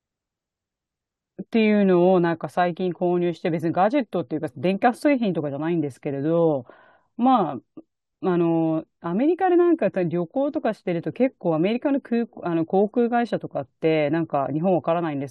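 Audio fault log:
No audible faults found.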